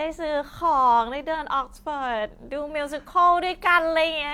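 No technical faults can be heard in the speech.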